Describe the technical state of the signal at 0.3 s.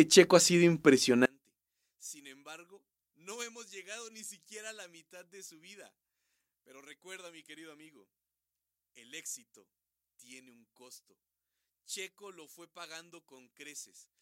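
At 0.3 s the signal is intact, with no dropout, clipping, glitch or other fault present at that moment.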